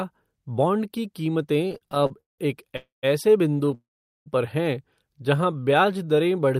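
Speech with network playback faults. Repeated stalls (stutter) at 1.65–2.40 s (14 gaps, longest 179 ms, about half the span filled) and 3.61–3.74 s (four short gaps) make the audio drag, showing as repeated, smeared spectrogram frames. A call audio freeze at 2.76–3.05 s (264 ms inserted, 160 ms silent) and 3.74–4.28 s, just before "पर हैं" (515 ms inserted, 430 ms silent), is a fading buzz into silence, a flat waveform gap, likely from delayed packets emptying the jitter buffer. A jitter buffer slow-down at 5.18–6.06 s, after "पर हैं", repeats pitch periods to add 115 ms, so the speech plays at 88% speed at the same pitch, with horizontally stretched harmonics.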